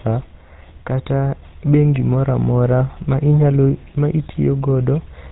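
GSM full-rate codec damage runs throughout: pulse-driven vocal-tract coding with nothing above 4 kHz leaves the speech buzzy and gravelly, consistent with roughly 13 kbps.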